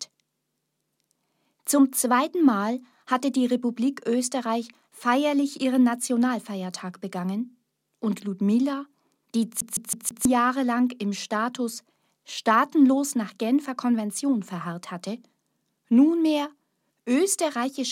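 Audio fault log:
9.61 to 10.25 s, CD stuck on one turn: the same 162 ms slice plays four times in a row, with a tiny mute at each jump. The pickup keeps getting knocked back a track at one spot, giving that quick, even skipping-disc stutter.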